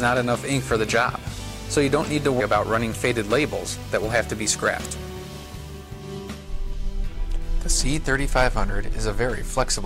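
At 2.39 s there is a brief burst of damaged data in a compressed stream, heard as a short blip. Corrupted bytes in the file made the decoder misread a frame there. It lost sync, then picked up again at the next valid frame header.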